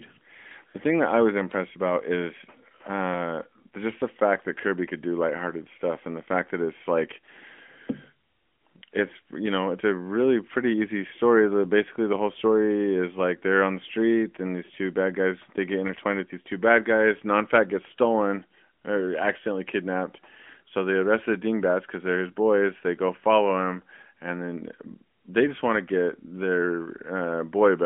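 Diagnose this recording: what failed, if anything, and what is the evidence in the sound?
Nothing has failed here; the speech simply comes through an AMR narrowband mobile codec at 12.2 kbps, so its light codec damage and the cut-off around 3.6 kHz are just what that phone-band path sounds like.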